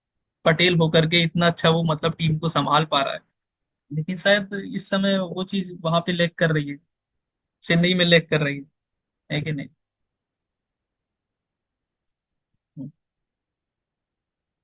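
No technical faults are audible.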